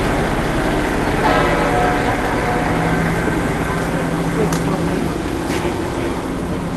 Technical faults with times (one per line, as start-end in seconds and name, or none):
none